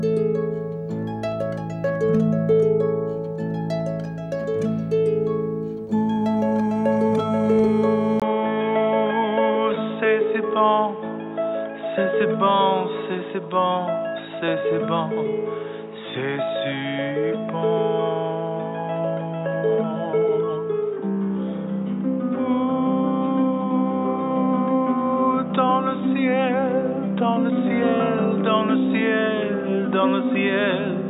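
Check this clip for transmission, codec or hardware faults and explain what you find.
One fault: from 8.20 s to the end, the input appears to have switched to a poorer device, likely a different microphone or a headset's call profile taking over mid-recording. The new path passes nothing above 3.8 kHz, so the sound turns abruptly dull and boxy after a brief gap of about 20 ms at the switch. Overall level stays about the same, but a new background noise floor appears, roughly 30 dB below the signal.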